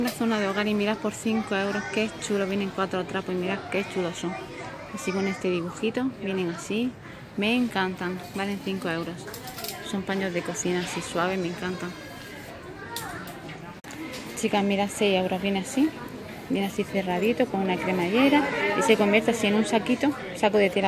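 No technical faults can be heard anywhere in the signal.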